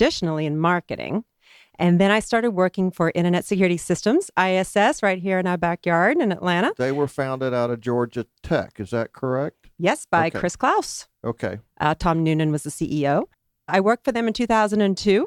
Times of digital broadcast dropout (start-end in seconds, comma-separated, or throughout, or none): none